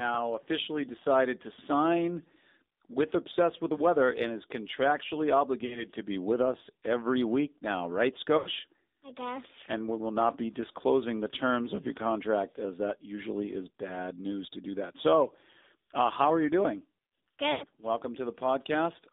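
Throughout, the speech carries AMR narrowband mobile codec damage at 7.4 kbps. Band-limiting keeps only about 250 Hz to 3.7 kHz, and the sparse pulse excitation makes the voice plainly buzzy and synthetic. A spectrogram shows a hard ceiling near 3.7 kHz with nothing above it.

Lost AMR speech frames hit at 5.66–5.86 s, 8.38–8.49 s and 17.52–17.66 s. The decoder repeats its last pitch and vocal tract settings at falling gain, so the sound smears and fades. The gaps fit roughly 40, 80 and 100 ms of lost audio. The waveform shows a decaying envelope with a weak restart.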